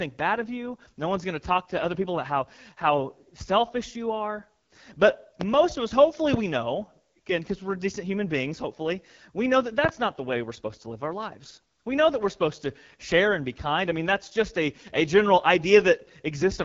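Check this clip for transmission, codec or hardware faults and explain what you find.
Two faults are present: wideband codec damage throughout, and two loud pops.

AMR wideband (HD Voice) codec, throughout: the speech is rebuilt from a pulse-excited vocal tract model, with noise-filled highs and nothing above 7.4 kHz. The plainly rough, raspy texture fits the 8.85 kbit/s mode, one of its two lowest rates.

Loud pop, at 5.41 to 5.44 s (after "selfish you are but", before "of us hopefully") and 9.84 to 9.92 s (after "hopefully we know that", before "not the way we're"): sharp pops stand about 15 dB above the speech, which continues underneath. The first is single and the second a double. They are likely voltage spikes from a connector, switch or static discharge.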